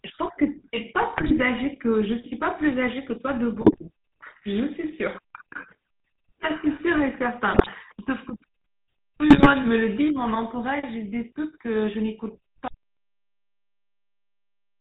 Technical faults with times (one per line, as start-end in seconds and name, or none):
0.00-14.81 GSM full-rate codec
1.17-1.39 GSM bit errors
3.60-3.87 GSM bit errors
7.52-7.69 GSM bit errors
9.30-9.54 GSM bit errors
12.68-14.81 audio dropout to silence